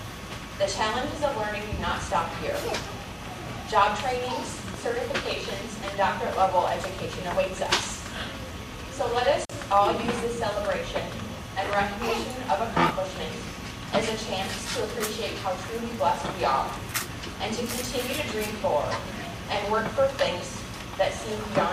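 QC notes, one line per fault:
9.42–9.52 s, intermittent contact: a loose plug or cable connection briefly lost contact, opening the signal path for about 45 ms. The audio drops out abruptly, with crackle at the break and remake edges and faint hiss left during the gap.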